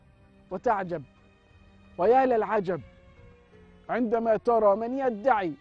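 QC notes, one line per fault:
2.56–4.76 s, wrong sample rate: the sound plays about 8% slower (speed 0.919) and roughly 1.5 semitones lower, with no conversion between rates. Speed and pitch drop together by the same ratio, which fits 24 kHz material played back at 22 kHz.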